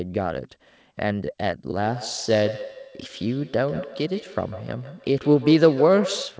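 From 1.79 s to the end, a feedback echo between two devices sends each word back roughly every 150 ms, thin and ringing, peaking about 11 dB below the speech. The waveform shows trailing copies at that spacing, and the spectrogram shows repeated, fading smears.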